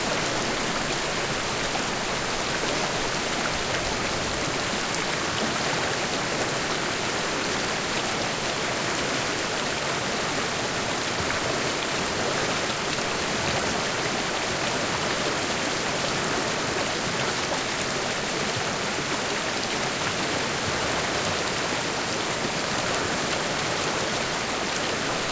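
No technical faults can be heard anywhere in this recording; the signal stays intact and continuous throughout.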